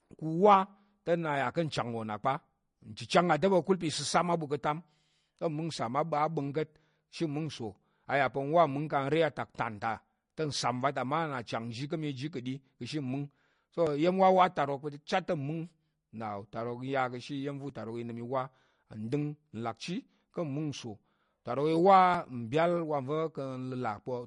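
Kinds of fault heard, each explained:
MP3 compression: Across the whole speech clip the sound has a watery, swirly quality, with plainly audible codec damage and nothing above 10.5 kHz, which points to a low-bitrate encode around 40 kbps. Likely cause is MP3 coding, which zeroes weak frequency lines as bits run short.
Dropped buffer (overrun): The audio jumps ahead with no gap at 2.24 s just after "wo nna", and at 13.87, 17.70 and 22.14 s. The likely cause is a capture buffer overwritten before it was read, losing about 10 ms each time, about 30 ms at 22.14 s.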